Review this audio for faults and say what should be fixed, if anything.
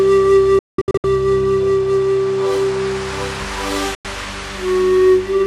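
There are two digital broadcast dropouts. From 0.59 to 1.04 s the sound mutes in several short holes totalling about 350 ms, the longest lasting 192 ms. At 3.95 to 4.05 s there is a single 96 ms gap. Each hole opens and closes with a 3 ms fade. The pattern points to roughly 32 ms frames failing their checksum, with the receiver muting until good frames return. Unlike a buffer underrun or packet-loss concealment, these gaps are clean silence with no repeated or smeared sound, and the programme resumes later in time, so the missing audio is simply gone. A stronger received signal or better antenna placement, plus more robust error protection in the transmission, would prevent it.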